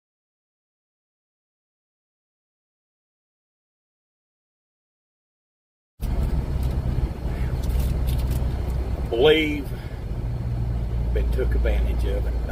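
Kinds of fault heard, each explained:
Call bitrate drop: the call's bandwidth estimate fell and the encoder was forced onto a much smaller bit budget, so each stretch of audio was coded more coarsely. From 4.34 s to 6.33 s the sound loses detail and turns rougher, which fits a fall from around 64 kbps to about 28 kbps. The degraded quality lasts roughly 1.9 s before the bitrate recovers and the fuller sound returns.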